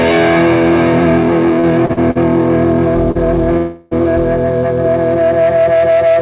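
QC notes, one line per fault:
1.6–2.17 s, repeated stalls (stutter): the sound drags and catches four times in just over half a second, each catch briefly smearing the last sound before things move on. Roughly a quarter of that span, about 155 ms in all, is filler, with the longest hold 48 ms. Packets were arriving late or too slowly, so the jitter buffer kept running dry and the receiver padded each wait by continuing the previous sound. Nothing is dropped, but the timing stumbles.
3.11–3.17 s, short stall from a late packet: one sound hangs on too long, a 36 ms stretch with a slight buzz or dip, then the audio resumes exactly where it left off. A single packet missed its slot, the jitter buffer emptied, and the receiver extended what it already had until the packet turned up. The delay grew by the same 36 ms, so nothing is lost; the audio simply runs later from here.
3.57–3.93 s, call audio freeze: the audio locks up for about 342 ms, the last sound turning into a fading buzz or hiss that never quite drops to silence, then it picks up from the same point. 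The likely cause is packets held up in transit long enough for the jitter buffer to run empty, with the receiver bridging the wait. The gap is added rather than cut, so nothing is missing. Across all three, the band stops at 4 kHz, which fits a G.711 mu-law call path at 64 kbps.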